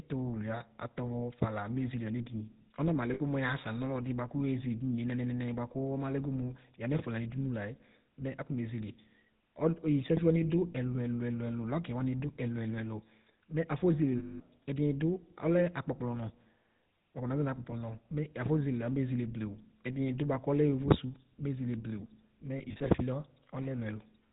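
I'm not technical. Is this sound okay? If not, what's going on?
No, it isn't quite okay. All the way through, the speech has a buzzy, gravelly roughness, and it sounds narrow and muffled, as if heard over an old mobile phone. That is the GSM full-rate codec, the original mobile phone voice compression. It rebuilds the voice from a simplified model driven by a regular pulse, keeps only part of the detail, and drops everything above 4 kHz. The roughness comes from that pulse and the missing detail.

There are also brief moments where the voice turns into a rough, metallic ring. These are lost GSM frames. Small chunks of the signal went missing, and the phone system filled each gap by repeating the last good chunk. The shortest is at 3.14 to 3.21 seconds and lasts about 60 milliseconds. The longest is at 14.18 to 14.41 seconds and lasts about 220 milliseconds. The third comes right after "mezele blewu", between 22.58 and 22.89 seconds. 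There the losses are scattered in short bursts over about 280 milliseconds.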